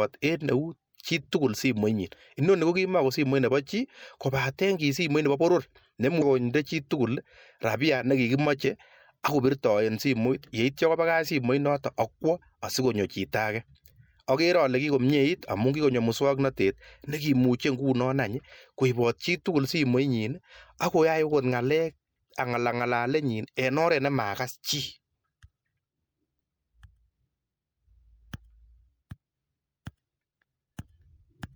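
At 6.18 to 6.22 s the speech is broken for roughly 40 ms, the mark of damaged data in a compressed stream. A stretch of the encoded bitstream is corrupt there, so the decoder misreads or discards the affected frames, loses sync and hunts for the next valid frame header. The bad frame comes out as a brief disturbance in the speech.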